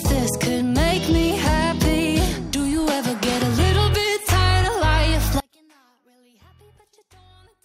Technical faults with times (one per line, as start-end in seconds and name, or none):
5.40-7.64 one channel inverted